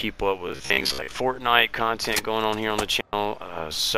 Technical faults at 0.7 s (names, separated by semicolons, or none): robotic sound from repeated short buffers